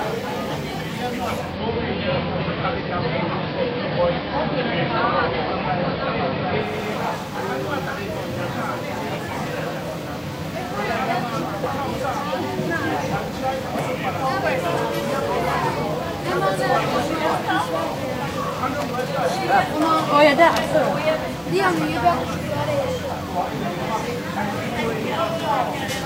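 A recording of everyday sounds turns dull and hissy from 1.33 to 6.84 s, shifting about 3 dB in level. This is digital radio blending to analogue: the receiver cross-fades over 265 ms to the station's AM broadcast, which brings hiss roughly 30 dB down and then fades back.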